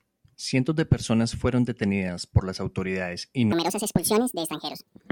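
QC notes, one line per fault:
3.52–5.12 s, section at the wrong speed: after "por las autoridades y" the speech jumps to 1.72 times its recorded rate, pitch rising roughly ten semitones with it, which is likely a player or editor clocking this segment wrongly, so tempo and pitch shift together.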